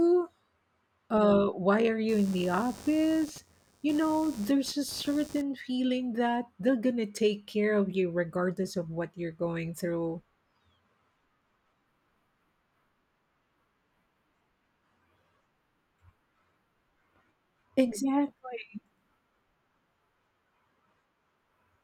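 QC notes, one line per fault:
2.09–5.42 s, computer activity noise: a buzzy, chirping scratch sits under the speech for just over three seconds, pulsing at around 100 times a second and roughly 20 dB below the speech level. It rises and stops on its own timing, unrelated to what is being said. Shifts in load on the processor, graphics card or mouse disturb the ground shared with the audio circuit, so the computer's electrical activity leaks into the signal.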